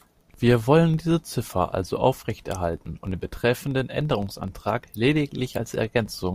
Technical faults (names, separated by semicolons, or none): filter restarted on every block